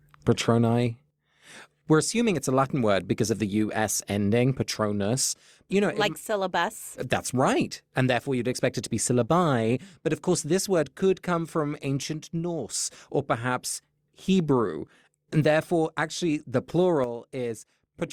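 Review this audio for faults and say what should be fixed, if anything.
One channel drops out at 12.03–12.69 s, after "word could come from" and before "or perhaps", and again from 17.04 s to the end. The speech level drops abruptly by about 6 dB, likely because one stereo channel goes silent and halves the mono sum. Fix this by checking both channels' connections and routing before mixing down.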